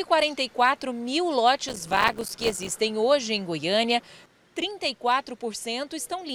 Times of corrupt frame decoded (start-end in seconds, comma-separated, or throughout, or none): none